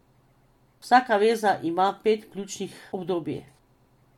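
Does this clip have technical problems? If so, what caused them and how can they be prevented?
No, nothing stood out as a technical problem on listening to this speech clip.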